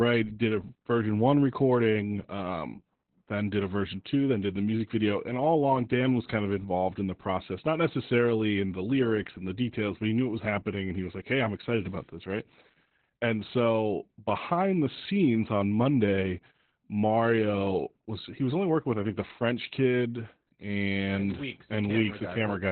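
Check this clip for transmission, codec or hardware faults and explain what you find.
One codec fault runs through the whole clip. Opus voice compression, throughout: the SILK coder narrows the speech to 4 kHz and codes it coarsely, fitting a bitrate around 8 kbps, so it sounds muffled, hoarse and slightly robotic.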